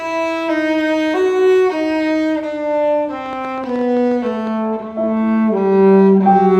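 Uneven ticking, roughly as loud as the sound itself, runs from 3.26 to 4.48 s: a train of clicks, about 9.9 per second, likely from electrical interference.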